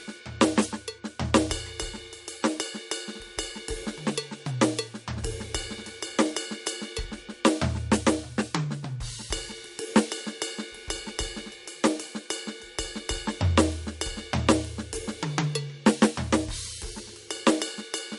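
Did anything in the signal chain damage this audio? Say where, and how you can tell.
Yes, at the codec stage: the music has plainly audible MP3 compression from start to finish, likely from a low-bitrate encode, one that fits roughly 48 kbps. A spectrogram shows a hard ceiling with nothing above 11.2 kHz, where the starved encoder simply stopped spending bits on treble.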